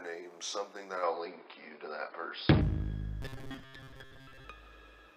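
Input switched to a poorer device, from 1.03 to 2.61 s: the sound abruptly loses its top end, so it turns dull and boxy. It likely comes from the recording path changing to a narrower-band microphone or a headset's call profile. The switch happens without any gap and the loudness stays roughly the same, but a faint new background noise arrives with it, far below the sound. At 2.61 s the full bandwidth returns just as suddenly.

Robotic sound from repeated short buffers, from 3.22 to 4.44 s: the audio collapses into a rigid, metallic buzz pitched at 133 Hz. That fixed tone is the repeat rate of a fragment roughly 7.5 ms long. It was likely produced when fresh audio arrived too slowly and the playback side kept re-sending the last short block to fill the gap. Most of this stretch is repetition rather than real audio, so the underlying sound is only loosely traced beneath the buzz.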